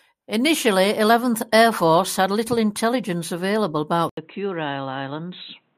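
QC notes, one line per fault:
4.09–5.77 s, input switched to a poorer device: 80 ms gap after "had little intelligence available", then nothing above 4 kHz, slightly quieter, faint new hiss; likely a narrowband microphone took over.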